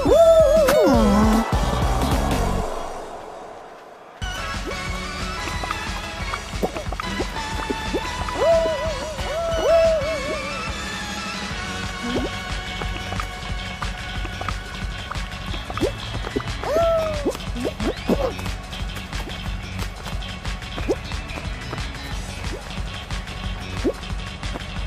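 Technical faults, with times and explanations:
No technical faults can be heard anywhere in the audio.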